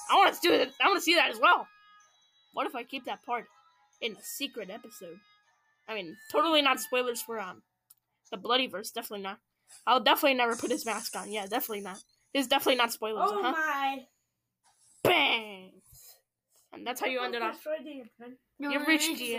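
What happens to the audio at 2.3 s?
Nothing goes wrong at 2.3 s; the audio runs through that moment intact, with no dropout, click, glitch or other fault.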